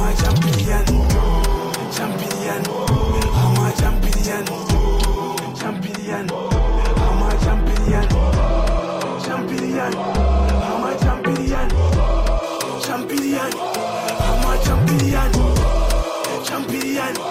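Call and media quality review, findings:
Dull, muffled audio from 5.54 s to 12.43 s. De-emphasis applied wrongly: a treble-cut filter, probably in the playback or decode stage, acting on audio without matching pre-emphasis. Smooth high-frequency roll-off, about 10 dB down at 10 kHz relative to 1 kHz.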